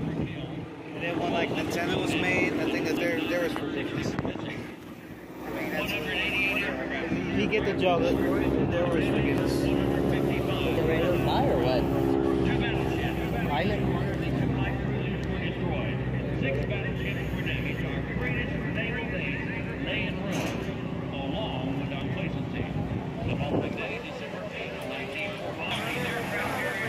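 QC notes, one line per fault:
2.97 to 25.54 s, dropped buffer (overrun): the sound jumps abruptly at 2.97, 9.38, 10.77, 22.01 and 25.54 s, and there is no gap at any of them. Roughly a tenth of a second is missing at 2.97, 9.38 and 25.54 s, and about a fifth at 10.77 and 22.01 s. This is likely the capture side failing to read its buffers in time, so each overwritten piece is lost and the surrounding audio is spliced end to end.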